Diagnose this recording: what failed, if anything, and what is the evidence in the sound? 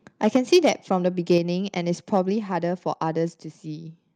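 Microphone overload at the converter, likely from excessive input gain: peaks flatten harshly from 0.24 to 0.69 s (about 5 dB over), 1.30 to 1.38 s, and 2.13 to 2.18 s. Unlike codec distortion, the crackle follows the loudest syllables.

Microphone volume stepped down, likely by call processing's automatic gain: voice and background drop together at 0.37, 1.38, 2.40 and 3.42 s, by about 2, 5, 2 and 3 dB. They are abrupt single steps, not a smooth fade.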